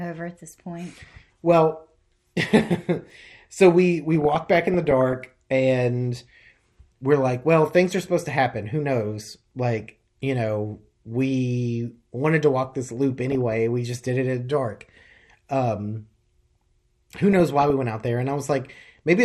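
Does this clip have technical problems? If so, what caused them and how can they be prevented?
Yes. MP2 compression runs throughout: the speech sounds dull and gurgling, with grainy distortion where upper sub-bands drop out and what remains is coarsely quantised. This is likely low-rate MPEG Layer II coding, consistent with about 80 kbps. A higher bitrate or a more efficient codec would prevent it.

DAB burbling appears at 0.59–1.27, 4.15–5.14, 9.80–9.92, 13.12–13.52, 15.17–15.20 and 17.33–17.70 s as short blips of noise. Residual bit errors of a few tenths of a percent corrupt samples, putting blips of noise in single sub-bands, and scale factors, making sub-bands jump in level for up to a frame. Stronger reception or better antenna placement would prevent it.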